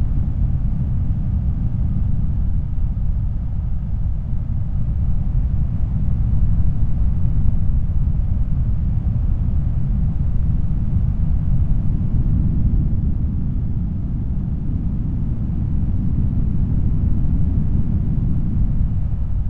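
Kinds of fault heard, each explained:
Nothing stood out on listening to this recording of sounds.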